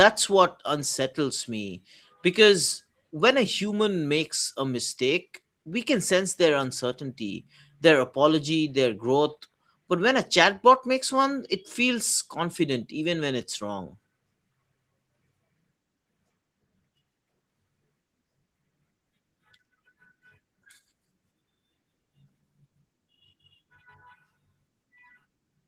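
No faults detected in the speech, and the Opus voice compression keeps the full band with only light coding texture, consistent with roughly 20 kbps hybrid operation.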